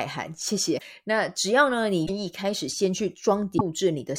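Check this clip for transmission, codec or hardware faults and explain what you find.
Three brief glitches in the speech, at 0.77–0.81 s, 2.05–2.10 s and 3.57–3.61 s, are likely a broken MP3 bit reservoir: after cut frames, borrowed data is misread, giving a skip ahead.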